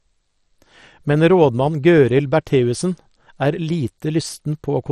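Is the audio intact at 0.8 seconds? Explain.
No, not at 0.8 seconds, and not anywhere else either: the whole speech clip carries what sounds like MP2 compression at heavy damage. The top end is dull, with nothing above about 13.7 kHz, and there's a gurgling, grainy edge where the sub-bands that remain are coarsely quantised and the upper ones drop in and out. That's likely an MPEG Layer II encoder starved of bits, and the degree fits a stream of around 56 kbps.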